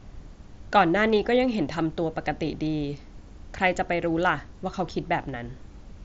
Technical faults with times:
none

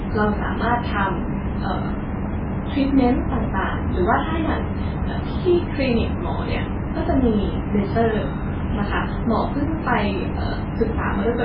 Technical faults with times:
0.00-11.45 MP3 compression
7.45-9.52 low bit depth with noise shaping

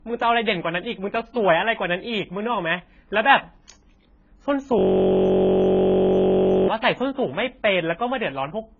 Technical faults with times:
0.00-8.80 low-bitrate audio saved at a high bitrate
4.79-6.68 system hang loop

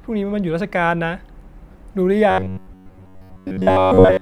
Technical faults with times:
2.31-4.21 robotic sound from repeated short buffers

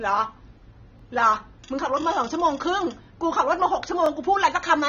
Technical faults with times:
0.00-4.89 AAC compression
0.99-1.02 overlapping chunks
2.02-2.04 overlapping chunks
3.04-3.06 overlapping chunks
4.06-4.09 overlapping chunks

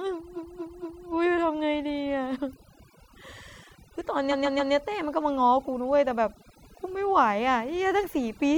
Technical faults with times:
0.00-8.57 overdone noise removal
0.35-1.05 repeated frames
4.30-4.72 repeated frames

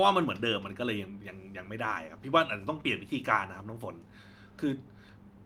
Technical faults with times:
none

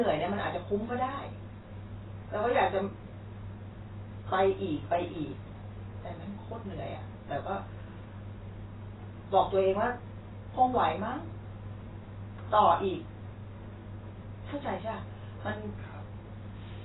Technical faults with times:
0.00-16.84 AAC compression

